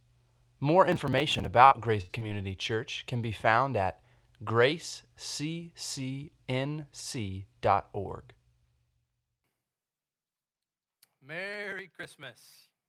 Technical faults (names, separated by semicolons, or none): processor overload crackle; burst of packet loss; short concealed packet loss